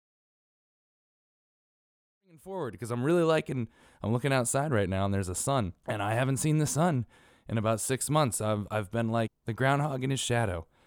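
Speech recording with a smooth, editor-style fade-in from around 2 s up to full level at 3.32 s, and no technical faults to report.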